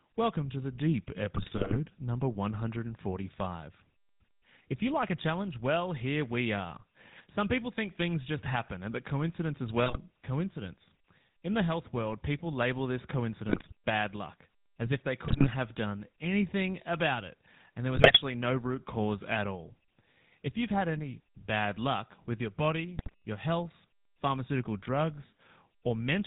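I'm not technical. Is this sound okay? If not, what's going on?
No. The whole recording has passed through the GSM full-rate codec, the compression system used by early mobile phones. It rebuilds the speech from a rough model of the voice, driven by a simplified pulse signal, and throws away everything above 4 kHz. Here that damage is plainly audible: the speech sounds dull, muffled and buzzy, with a gravelly roughness through the whole clip.

There are also GSM bit errors, where parts of the digital signal were corrupted on a poor connection. The receiving end then misreads the settings that shape each short slice of sound, so the speech briefly turns into squawks, pops and gargling. This happens six times. It happens from 1.36 to 1.77 s and from 9.86 to 9.98 s. It happens from 13.46 to 13.72 s, after "world people label this" and before "bad luck as if". It happens from 15.26 to 15.47 s. 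It happens from 17.94 to 18.19 s, after "about it and there" and before "no root cause at". It happens from 22.96 to 23.14 s, after "bad luck with your" and before "your health pharmaceutical".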